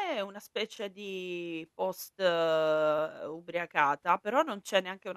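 At 0.76 s, just before "di post", there are repeated frames. A 26 ms slice of speech plays twice, which fits one compressed frame sent again. It sounds like a brief stutter. At 2.98 s, a 52 ms block repeats the same way, adding that much time.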